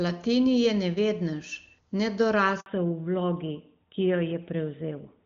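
A speech recording carried over a phone call, with two linked faults at the same moment. At 2.60 s there is a handover gap: the sound fades out within a few tens of milliseconds and stays silent for 60 ms, until 2.66 s, while the call moves between networks and no frames arrive. It is a clean hole followed by a changed sound, not the buzzy or repeated fragments that concealment of scattered packet loss would produce. From 2.66 s to the end, a fallback to narrowband takes hold. Before the gap the clear, airy top end fits an HD Voice link, most likely AMR-WB at a high rate. After it, nothing above 4 kHz remains, and the speech turns duller and rougher, which points to a narrowband codec around 12.2 kbit/s. A simple low-pass filter would not explain the abrupt switch right after the dropout or the added coarseness, and a low-rate wideband codec would still keep energy above 4 kHz.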